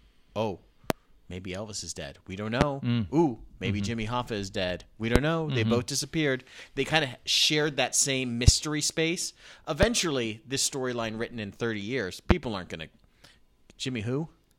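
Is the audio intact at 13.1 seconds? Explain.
Yes, the audio is intact at 13.1 seconds, with no dropout, click, distortion or other fault audible at that moment.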